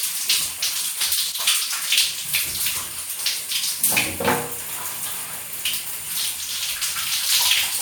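It's a recording of sounds with a sudden gain jump between 1.32 and 1.4 s, where everything drops by about 5 dB in one step, background included. It's likely a gain setting applied instantly rather than ramped, so the level snaps down between samples.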